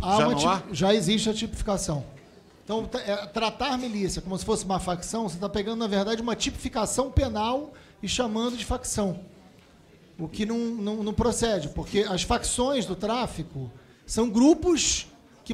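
Nothing in the audio stood out as a technical fault on listening.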